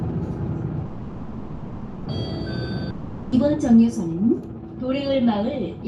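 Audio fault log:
0.85–2.09 s, call audio freeze: the last sound stretches into a fading buzz for about 1.2 s, then resumes where it stopped, likely packets stalling and draining the jitter buffer.
2.90–3.35 s, long network dropout: a fading fill covers about 0.42 s, then the audio jumps ahead with that stretch gone, likely from packets that never arrived.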